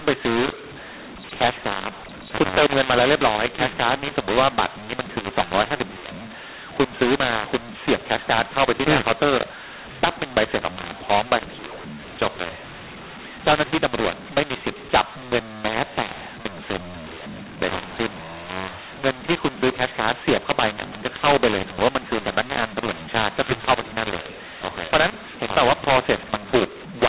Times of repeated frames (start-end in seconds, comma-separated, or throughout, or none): none